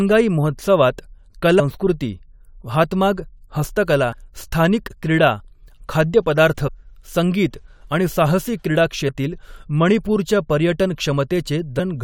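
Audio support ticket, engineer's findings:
Damaged data in the compressed stream, speech track. Corrupted frames make the decoder misread them, lose sync and hunt for the next frame header. Heard as short chirps or blips at 1.57–1.61 s, 4.13 s (after "हातमाग हस्तकला"), 6.66–6.69 s (before "संगीत आणि साहसी क्रीडा"), 9.08 s and 11.79 s. Probable component: transport or storage feeding the decoder.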